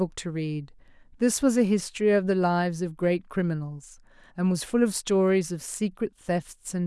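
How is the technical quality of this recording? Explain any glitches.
No glitches can be heard anywhere in this speech recording. There is nothing here that needs explaining.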